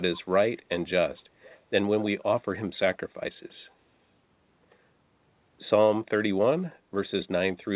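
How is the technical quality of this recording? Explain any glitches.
One glitch stands out: a short echo leak between 1.42 and 1.63 s. The far end was likely playing the call over a loudspeaker, and its echo canceller failed to fully suppress what its microphone picked up, so a fragment was returned down the line. It arrives about 241 ms behind the original speech, very faint, far below the direct voice, as a brief ghostly repeat. The whole recording is band-limited with nothing above 4 kHz, consistent with a narrowband telephone codec such as G.711.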